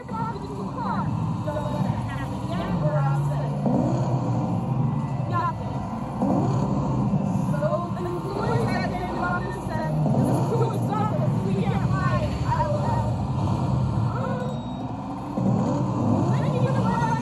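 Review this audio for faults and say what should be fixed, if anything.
There's a channel delay (doubling) running through the whole clip: every sound comes back as a second copy about 85 ms later, at the same level, so it reads as a tight slap echo or a doubled attack rather than one clean event. One channel is arriving late by a full buffer, and 85.33 ms fits a 4096-sample buffer at 48 kHz. When the two sides get summed to mono, the late copy stands out as its own repeat. To fix it, realign the lagging channel, and make sure both channels share the same buffer path and latency before any mono fold-down.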